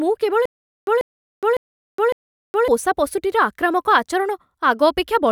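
From 0.46 to 2.68 s the speech breaks into a stutter with silent gaps: a 139 ms fragment plays four times, each followed by 417 ms of dead digital silence, repeating every 556 ms. This is likely a stalled player replaying its last buffer on each retry, with the intervening audio lost.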